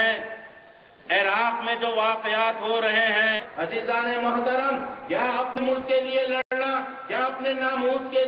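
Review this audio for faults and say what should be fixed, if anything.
Short concealed packet loss occurs at 3.35 to 3.41 s and at 5.53 to 5.57 s. About 40 ms of audio failed to arrive at the first point and about 20 ms at the second. Each time, the decoder covered the gap by extending the preceding sound, either from its pitch or as shaped noise, and then blended back into the real signal. The result is a brief smear or wobble. To prevent it, use a larger jitter buffer, add forward error correction, or make the network path more reliable so packets arrive in time.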